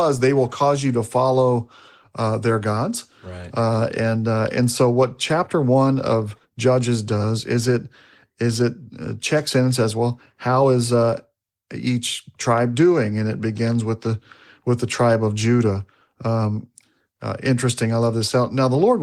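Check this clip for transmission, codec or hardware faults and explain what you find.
Nothing wrong can be heard anywhere in this recording.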